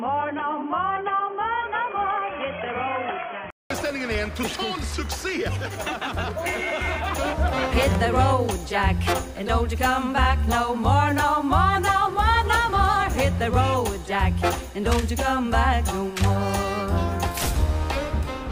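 From 0 to 3.70 s the input likely switched to a poorer device: dull, quieter sound with nothing above 3.3 kHz, then a 200 ms gap.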